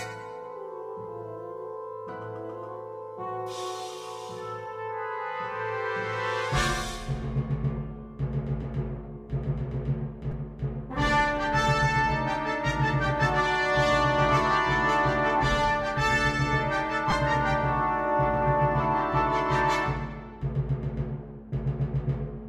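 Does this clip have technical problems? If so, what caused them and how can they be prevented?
Yes. Two repeated-buffer faults occur, at 10.32 s and 17.11 s. New audio did not arrive in time, so one very short block, which fits a 5 ms buffer, was replayed twice and then three times. Each repeat is heard as a brief buzzy click, and about 10 ms and 15 ms of sound are lost. Larger playback buffers and a higher-priority audio thread prevent this underrun.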